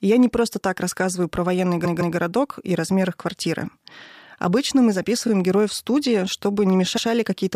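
Repeated frames: short runs of compressed frames were sent more than once, so the decoder replays them as stutters. At 1.84 s, after "так рассказываю про военный", a 0.16 s block plays two extra times; at 5.27 s a 26 ms block repeats before "героев в студии"; at 6.96 s a 0.10 s block repeats.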